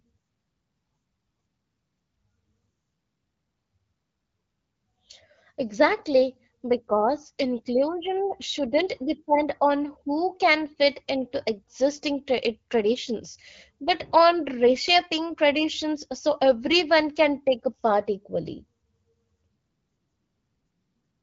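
No technical faults can be heard anywhere in this speech recording. What comes through is the light coding texture and roughly 7 kHz top end of the AMR wideband (HD Voice) codec, which fits a rate of 12.65 kbit/s.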